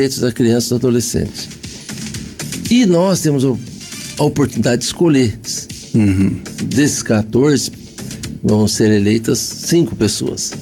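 Nothing stood out on listening; no technical faults could be heard anywhere in the audio.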